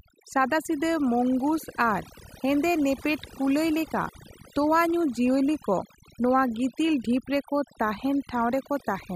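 Overdone noise removal runs through the whole recording. A noise reduction stage set far too strong is cutting individual frequency bands whenever they sit near its noise estimate. The background drops and breaks up into twinkling specks, and the speech loses its quieter components as they disappear along with the noise.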